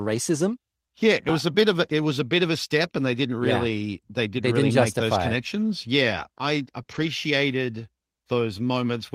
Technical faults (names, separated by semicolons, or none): dropped buffer (overrun); short concealed packet loss; lost packet rebuilt from error correction